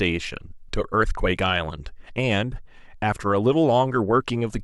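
Nothing in this bit of speech stands out as a technical problem; it just runs along without any glitches to point to.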